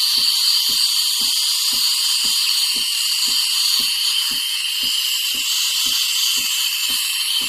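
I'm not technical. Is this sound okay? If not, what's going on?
Yes, this sound is fine, with no problems to report.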